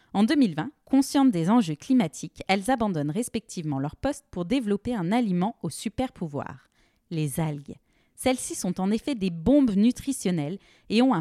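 No technical faults are audible anywhere in the recording.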